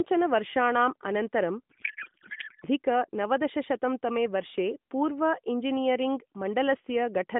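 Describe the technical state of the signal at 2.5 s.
At 2.5 s the speech is in a codec payload misread, running from 1.70 s, just after "वर्षाणां अनन्तरं", to 2.65 s, where "नवदशशतं तमे वर्षे" resumes. The decoder parses AMR frames with their bit fields shifted, which fits octet-aligned packing being read as bandwidth-efficient, so the speech becomes garbled warbling noise that barely tracks it. On a spectrogram the harmonic and formant structure gives way to smeared, patchy energy that stays inside the narrow AMR band, while the waveform loses its syllable envelope.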